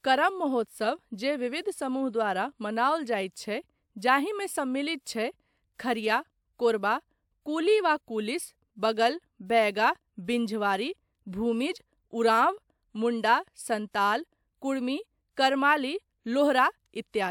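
No technical faults can be heard in the recording.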